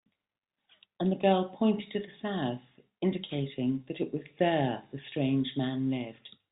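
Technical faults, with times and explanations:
No technical faults can be heard in the speech. The G.711 telephone coding path works as expected: the audio stops at about 3.8 kHz, and its character fits 64 kbps mu-law telephone audio.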